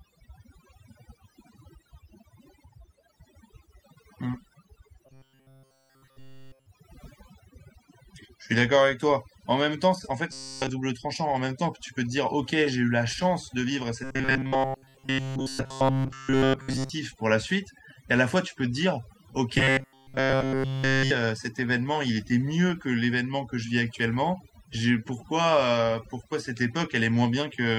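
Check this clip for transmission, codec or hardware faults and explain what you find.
Two faults are present in this speech clip.

Overdone noise removal runs through the whole clip. A noise reduction stage was set too hard. It pushes individual frequency bands down or off whenever they sit near its noise estimate. Quiet parts of the voice get cut along with the noise. The gaps between phrases drop to near silence, scattered with small twinkling specks.

Robotic sound from repeated short buffers occurs at 5.06 to 6.66 s, 10.31 to 10.69 s, 14.04 to 16.90 s and 19.58 to 21.11 s. In each stretch the voice becomes a rigid, metallic buzz at 133 Hz. It still loosely tracks the speech. The likely cause is audio arriving too seldom, with the player repeating its last short chunk to fill the gap. Here essentially all of the sound in those stretches is repeated material. The 133 Hz pitch fits a chunk of about 7.5 ms.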